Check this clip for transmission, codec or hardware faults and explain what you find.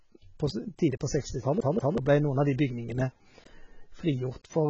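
Two faults stand out in this speech clip.

Throughout, the speech sounds dull and smeared, with a fizzy warble and nothing above 7.9 kHz. The likely cause is heavy AAC compression, which fits a very low bitrate around 16 kbps.

From 1.61 to 1.98 s, a 0.19 s fragment plays twice in a rapid, even stutter. This is a CD stuck on one turn: a scratch throws the laser back on each rotation.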